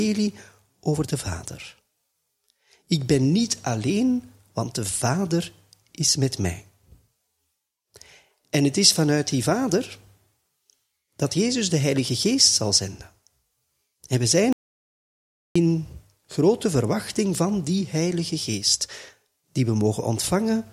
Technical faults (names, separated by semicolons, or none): audio dropout to silence